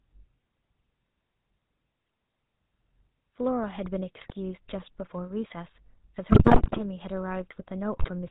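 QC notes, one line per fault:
Throughout: GSM full-rate codec. The speech passes through the first-generation GSM full-rate codec, which fits a 13 kbps stream, and the damage is plainly audible. The codec models the vocal tract as a filter and drives it with a sparse, regularly spaced pulse train, keeping only one in three excitation samples. Nothing above 4 kHz survives, so the speech is dull and band-limited and carries a buzzy, gravelly roughness.
4.17–4.32 s, 6.32–6.81 s, 7.96–8.11 s: GSM bit errors. Corrupted bits reach the decoder in three bursts. The shorter first and last bursts sound like a link error rate of roughly 3 percent, and the longer middle one sounds like nearer 5 percent. Damaged filter, pitch and gain parameters bend the spectrum and throw the level around from frame to frame, so each burst breaks up into squawks, pops and gargling. The middle burst lasts about half a second and is the most severe.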